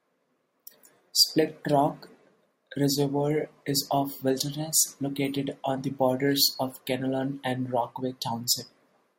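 Listening through this speech recording, nothing stood out as a technical problem at any point.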